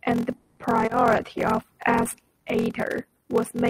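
Throughout the clip, a steady buzz at about 43.1 Hz runs under the speech, and everything plays at 0.861 times normal speed with pitch roughly unchanged. This is a block size mismatch (padded). One stage hands over shorter blocks than the next stage reads, and the remainder of each block is zero-filled. The buzz rate suggests 1024-sample reads, which fits a 44.1 kHz stream. The speed ratio points to writes of roughly 880 samples.

From 0.37 to 0.59 s the sound does not break off. Instead, the last sound is drawn out as a fading buzzy continuation for about 200 ms, never reaching silence. It then resumes exactly where it left off, with nothing lost. That is the signature of a call audio freeze, likely caused by packets stalling in transit and the jitter buffer draining. The resumed audio now sits about 200 ms later than before.

At 0.85 to 0.89 s, 20 ms of audio is missing. It comes across as a brief smear. 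This is short concealed packet loss: the decoder received nothing for that slot, so it extrapolated from the preceding sound, following its pitch if voiced or generating shaped noise if not, and then crossfaded back into the real signal.

From 1.11 to 2.39 s the speech turns coarse and duller. This is a call bitrate drop, from 40 kbps to 18 kbps, with the low rate held for about 1.22 s. After the bandwidth estimate fell, the encoder quantised more coarsely and gave up upper-frequency detail. Quality returns once the rate climbs back.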